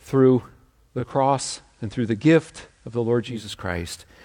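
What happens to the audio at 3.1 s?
The receiver has lost the digital stream and is on the FM analogue broadcast, a digital radio blend to analogue running from 0.81 s to 3.57 s with 366 ms cross-fades. At 3.1 s the speech is about 2 dB quieter, with faint hiss.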